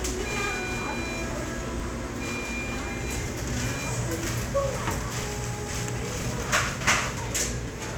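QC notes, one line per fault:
0.33 to 7.69 s, periodic USB or driver dropouts: around fifteen short losses of roughly 10 ms each, evenly spaced every 0.49 s. The missing audio is skipped rather than filled with silence, so each one is a small jump in the waveform, heard as a tick only while sound is present. The strict regular spacing sets it apart from random network packet loss, and the absence of silent gaps sets it apart from mutes.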